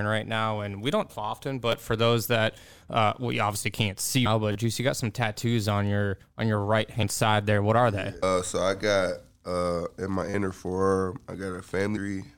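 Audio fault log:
1.09, 4.25, 7.02, 8.22, 11.95 s: compressed frames skipped. Soft, smeared blips where the speech leaps ahead by about 0.7 s after "we don't", 0.3 s after "we obviously can't see", 0.15 s before "side there", then 0.3 s and 0.2 s. Whole 26.1 ms frames were dropped, and overlapping frames blur each join.
1.72, 4.52–4.55, 10.30–10.34 s: repeated buffer. A sharp click, then short buzzy stutters, as one 10 ms slice plays twice, four times, then five times. New audio arrived late, so the device replayed its last buffer, with a hard join at each repeat.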